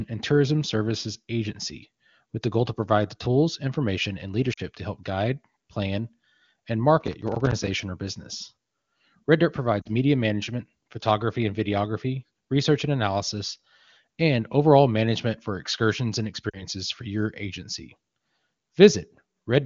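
At 4.53 s, 9.82 s and 16.50 s the speech briefly drops to near silence, each time for about 40 ms, which fits two lost AMR speech frames. The decoder bridged each gap by reusing the last good pitch and spectral envelope at falling gain. On a spectrogram each appears as a short smeared, fading patch of harmonics.

From 7.01 to 7.67 s a gritty crackle rides over the sound. This is processor overload crackle: repeated missed deadlines on buffers of roughly 5 ms each left tiny silent gaps with hard edges. The waveform shows a cluster of small dropouts, and the spectrogram shows vertical broadband streaks.

Between these faults the AMR wideband (HD Voice) codec sounds clear, which fits a high AMR-WB rate.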